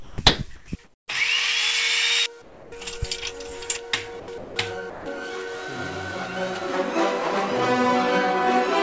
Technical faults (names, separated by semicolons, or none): sound dropped by the voice detector; comfort noise in place of the background